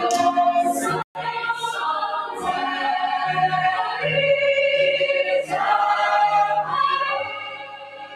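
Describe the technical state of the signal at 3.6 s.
At 3.6 s the signal is under a noise suppressor applied to music or sounds, active for the whole clip. A speech-tuned suppressor mistakes steady tones, ambience and reverb for noise and pulls them down by roughly 10 dB, while attacks pass. The sound pumps, flutters or thins out. On a waveform, the envelope collapses quickly after each onset. A spectrogram shows sustained partials and tails fading early, leaving gaps between events.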